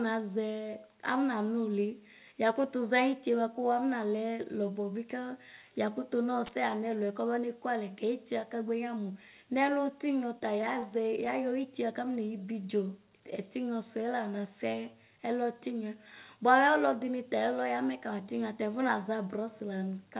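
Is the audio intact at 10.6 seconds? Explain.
No. Scattered short gaps run from 10.4 to 11.29 s, covering 10.6 s. Across that stretch about five packets arrived late or never arrived, and the receiver filled each hole, none longer than roughly 15 ms and about 50 ms in all, by stretching the preceding sound forward. The speech stays clear, but brief ticks, small smears and tiny hiccups break into it, all within the narrow band that stops near 4 kHz.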